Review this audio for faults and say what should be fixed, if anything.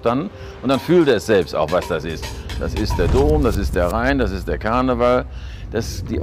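Hard clipping at 0.07–0.13 s, 0.70–1.78 s, 3.02–4.22 s and 4.66–5.17 s: peaks exceed the stage's ceiling by about 3–4 dB and are flattened, adding harsh high harmonics. Reduce gain before the overloading stage so peaks stay below full scale.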